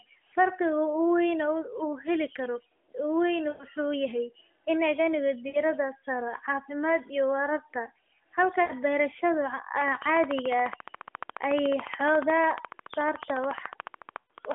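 First up, at 3.50 s, comes a case of lost AMR speech frames: about 100 ms where the decoder has no good data and keeps replaying its last pitch and vocal-tract settings at falling gain. You hear the sound stretch into a brief hum and sag before it snaps back a bit rough. The same thing happens for 60 ms at 5.48 s, 80 ms at 8.62 s, and 120 ms at 14.18 s, that last one sitting under the clicks. The longer gaps sag furthest toward silence.

From 9.81 s to the end, around 14.5 s, there's a train of clicks: a steady tick at 14 per second, around seventy in all. The pulses all share the same sharp shape and stand well above the speech, about 15 dB hotter at their peaks. They carry straight through the pauses, so you can't miss them. Likely cause is interference from nearby equipment or a faulty connection or power supply injecting pulses.

Throughout, everything sits in the AMR narrowband band of roughly 250 Hz to 3.4 kHz, and the light codec colouring fits the top 12.2 kbps mode.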